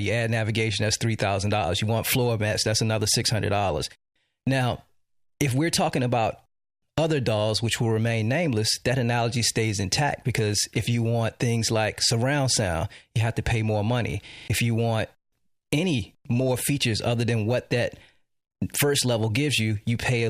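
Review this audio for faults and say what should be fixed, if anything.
A system hang loop runs from 14.28 to 14.48 s. For that stretch the output stops moving forward: a single 40 ms slice of audio plays back five times in a row, giving a hard, rattling stutter at 25 Hz. This happens when the host or driver stalls while the audio interface keeps reading the same ring-buffer segment, so about a fifth of a second of real audio is replaced by the repeats. To prevent it, give the audio thread real-time priority and find the driver or system stall that blocks buffer refills.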